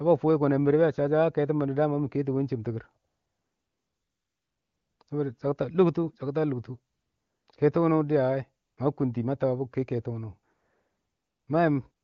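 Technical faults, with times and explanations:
3.07–4.99 s, 5.03–5.07 s, 6.93–7.47 s, 8.65–8.77 s, 10.53–11.47 s, 11.91–12.04 s: AMR comfort noise. The phone's voice activity detection judged the talker silent and stopped sending speech frames, first just after "chɪm tikir" for nearly two seconds. The receiver then filled each gap with synthetic noise built from a rough level-and-spectrum description. The real background gives way to a smooth, steady hiss that switches in and out at each boundary.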